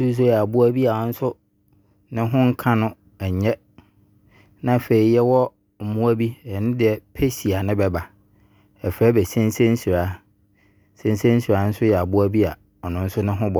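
From 0.70 to 1.42 s the speech runs 5.25% fast and sits about 88.5 cents sharp, close to a semitone, then snaps back to normal. This is likely a drift correction step, where clock-matching software briefly raised the playback rate to drain its buffer.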